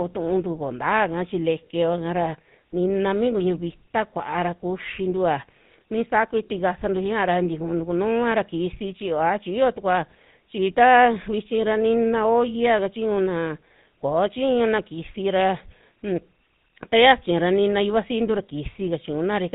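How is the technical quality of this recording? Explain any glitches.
The technical quality is held back by one clear problem. The whole speech recording carries GSM full-rate codec damage: vocal-tract modelling with sparse pulse excitation and nothing above 4 kHz, giving a buzzy, gravelly roughness consistent with 13 kbps.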